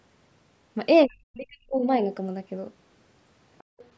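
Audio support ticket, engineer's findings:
Speech suppressed in double talk, 1.06 to 1.8 s: talker level sinks by roughly 40 dB at its deepest, dips and gaps across about 0.7 s. Likely cause: echo canceller misreading simultaneous near and far talk as echo, attenuating both.

Other side's voice leaking through, 3.58 to 3.64 s: brief scrap of a second voice, far below the talker, around 35 dB down. Likely residual loudspeaker echo the canceller failed to subtract from the microphone path.

Background gated by the echo canceller, 3.64 to 3.79 s: room tone drops by about 39 dB for 150 ms, then returns. Canceller clamping microphone gain while the far end plays, releasing afterwards. The call microphone processing band tops out at 8 kHz.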